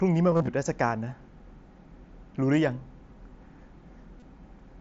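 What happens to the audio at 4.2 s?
Concealed Bluetooth headset packet loss hits 4.20 to 4.22 s. The receiver fills the gap by repeating recent waveform: a brief buzz, then slight warble.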